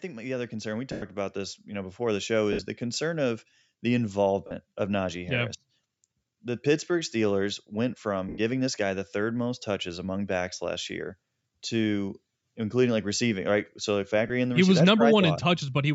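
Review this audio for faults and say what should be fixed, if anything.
Automatic gain rising runs from 0.05 to 2.28 s. Speech and room noise swell together by about 9 dB over more than two seconds as the gain control, starting from an input it judged too quiet, ramps its gain upward instead of settling quickly. The opening syllables are therefore weaker than what follows, and the background rises along with the speech. To prevent it, start the gain control from a sensible preset level or give it a faster attack so the ramp finishes before speech begins.

Lost LE Audio frames occur at 0.92 to 1.02 s (100 ms), 2.53 to 2.61 s (70 ms spread over 80 ms, the longest unbroken gap around 70 ms), 4.47 to 4.51 s (40 ms), 8.29 to 8.38 s (90 ms) and 14.28 to 14.30 s (20 ms). In each gap the LC3 decoder conceals the missing data by repeating the last spectrum with randomised phase signs, so voiced sound turns into a brief noisy smear. 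The gap lengths fit whole 10 ms frames. To prevent it, improve the Bluetooth link margin or add retransmission headroom so fewer frames go missing.

The band limit at 8 kHz comes from the call microphone processing and needs no fix.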